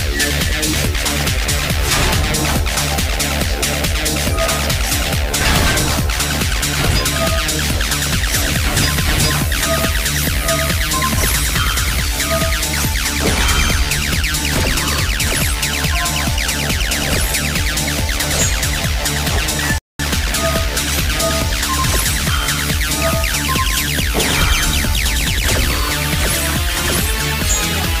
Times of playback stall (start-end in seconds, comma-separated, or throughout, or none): 19.78-19.99